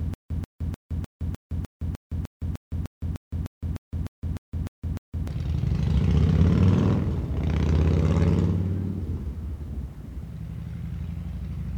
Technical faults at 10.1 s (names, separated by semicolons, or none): none